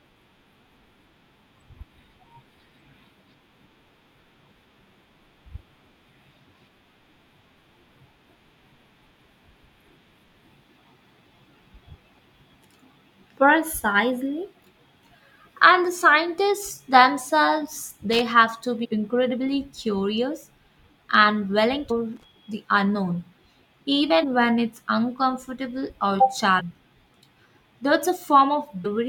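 Right after "and the scientists themselves", at 18.13 to 18.21 s, there's a short burst of loose connector crackle. A worn or dirty contact is making and breaking as it shifts, so the signal gets chopped into scratchy fragments. It clears before "have to". The same crackle comes back at 22.16 to 22.24 s, just ahead of "the unknown", again about 80 ms of irregular scratching.

In between and after those, you get the signature of damaged data in a compressed stream. The first one lands at 18.83 to 18.86 s, between "have to" and "incredibly curious". Then there are more at 21.90 s, 24.22 s, 26.59 to 26.61 s and 28.84 s. Each is a tiny chirp or blip of 25 ms or less. Corrupt bytes threw the decoder out of sync, and it had to hunt for the next good frame header. That's why each one is such a quick glitch.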